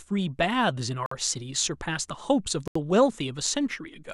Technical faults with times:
1.06-1.12 Bluetooth stall
2.68-2.75 Bluetooth stall

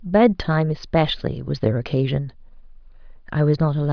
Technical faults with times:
none

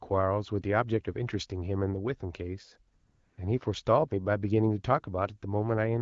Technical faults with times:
2.95-3.37 AMR comfort noise

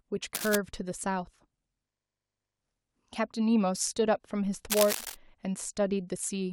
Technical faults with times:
0.35-0.56 cable scratch noise
4.70-5.15 cable scratch noise

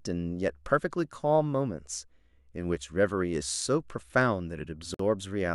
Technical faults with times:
4.94-4.99 gap at a join of encoded pieces

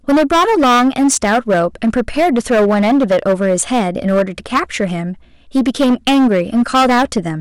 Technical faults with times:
0.00-7.40 hard clipping

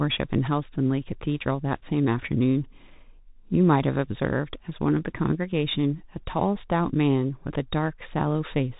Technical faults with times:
0.00-8.79 Bluetooth CVSD headset codec

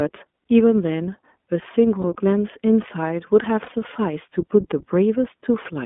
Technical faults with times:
0.00-5.86 iLBC codec
2.02-2.04 lost iLBC frames
3.64-3.69 lost iLBC frames

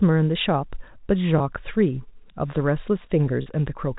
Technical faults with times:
1.38-1.40 packet loss with pitch repetition
3.42-3.46 packet loss with pitch repetition

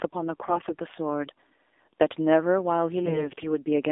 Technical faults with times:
0.00-3.92 AMR narrowband mobile codec
0.32-0.80 AMR bit errors
3.02-3.46 AMR bit errors

